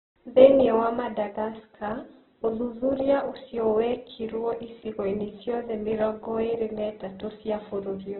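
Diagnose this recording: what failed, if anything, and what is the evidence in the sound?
At the codec stage, likely Opus compression near 8 kbps: throughout, the speech has nothing above 4.1 kHz and sounds rough and grainy.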